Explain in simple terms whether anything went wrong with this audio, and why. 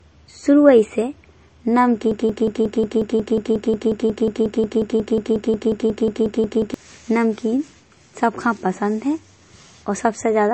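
A broken-record loop runs from 2.11 to 6.74 s: a tiny piece of the speech, about 0.18 s long, repeats back to back for over four seconds. The player or stream likely stalled and kept replaying its last fragment, so the speech meant for that stretch is gone.

The whole clip also shows low-bitrate audio saved at a high bitrate. It sounds dull, with nothing above 8.3 kHz. This likely comes from a heavily squeezed MP3 later saved again at better quality, which made the file bigger without restoring the lost detail.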